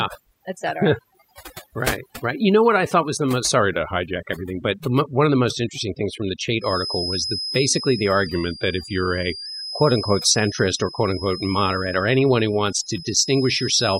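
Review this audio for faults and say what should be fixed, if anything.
Overdone noise removal runs through the whole recording. The noise reduction was set too aggressively, so any frequency band that dips near the tool's noise estimate gets pushed far down or cut entirely. Quieter parts of the speech are removed along with the noise. What remains of the background breaks into twinkling, warbling specks that flicker in and out instead of forming a steady floor. To prevent it, apply gentler reduction settings, or reduce noise at the source so less processing is needed.

A drift correction step likely caused two sudden detunings. In each, clock-matching software changed the playback rate in one jump to rebalance its buffer. The first runs from 3.60 to 4.16 s, right after "thought was the most" and before "everything but the one". The second runs from 8.26 to 9.46 s. Both times the speech slows by 5.95% and drops 106 cents, about a semitone, then snaps back to normal speed and pitch. 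To prevent it, use a resampler that corrects drift continuously in tiny increments.

A feedback whistle appears at 6.52 s, just after "interesting things from the", and continues to the end of the clip. The likely cause is a loudspeaker-to-microphone loop sitting right at the edge of feedback. One frequency keeps ringing there without building into a full howl. It is heard as a thin tone at 5.1 kHz, about 10 dB below the speech, that swells and fades slowly in level. To prevent it, reduce monitor gain or move the microphone away from the loudspeaker, and notch 5.1 kHz if needed.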